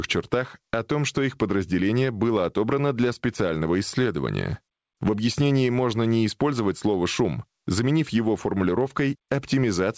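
Speech runs through a call path with nothing above 8 kHz, consistent with G.722, and shows gain pumping throughout: the gain swings by around 10 dB, likely from excessive mic gain driving a fast limiter.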